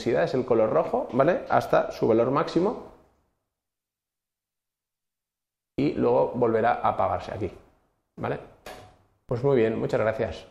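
At 9.29 s the waveform's zero line suddenly jumps by about -36 dBFS, a DC step, and a 20 Hz high-pass then pulls the offset back to zero. The jump is heard as a single low thump or click while the sound carries on unchanged.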